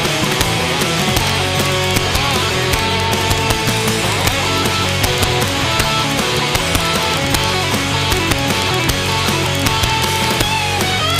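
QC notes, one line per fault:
Throughout: integer overflow. The gain runs about 1 dB past the integer ceiling, and instead of being held at full scale, the few peaks that exceed it, a small fraction of a percent of samples, wrap round to the opposite extreme. Each wrap is a near full-range jump, heard as a sharp crack on loud moments. The waveform shows isolated spikes flipping sign across the full range, and the spectrogram shows thin vertical broadband lines at those peaks.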